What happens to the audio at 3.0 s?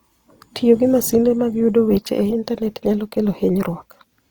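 At 3.0 s the speech sounds rough and grainy, as it does throughout, likely from Opus compression at a rate near 24 kbps, where CELT fills starved bands with noise.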